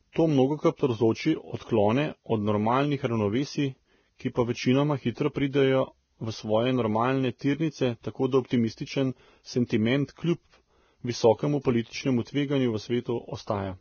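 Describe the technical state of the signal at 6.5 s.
At 6.5 s the speech carries heavy Vorbis compression damage, present throughout: nothing above 6.5 kHz, coarsely quantised treble turned to hiss and grain, likely from a very low bitrate.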